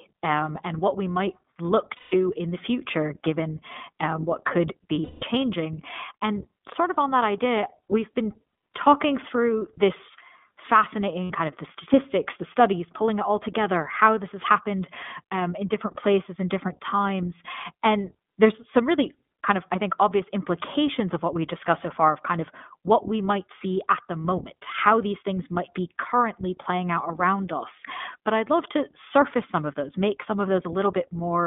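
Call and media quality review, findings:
iLBC codec, whole call: narrowband, nothing above roughly 3.6 kHz or below 200 Hz, plainly rough and synthetic. Each frame's excitation is coded on its own, which fits the 15.2 kbps, 20 ms mode.

Lost iLBC frames at 1.96–2.14 s (after "what we might look", about 160 ms), 5.04–5.25 s (after "given um what could", about 180 ms), and 11.24–11.34 s (before "kind of the statistics", about 60 ms). Each gap is a held, buzzy vowel as the decoder repeats the last pitch cycle with noise. Clean recovery right after.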